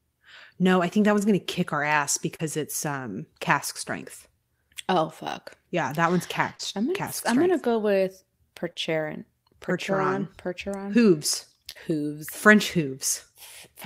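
Speech with four brief short concealed packet losses: at 2.35 to 2.41 s after "gonna kick our ass", 6.55 to 6.61 s after "that one's", 8.73 to 8.77 s after "I'm gonna go with", and 11.71 to 11.77 s. About 40 ms of audio went missing each time (20 ms at 8.73 s). Instead of a silent hole, as in a plain dropout, the decoder stretched the preceding sound and crossfaded back, leaving a smeared, wobbly blip.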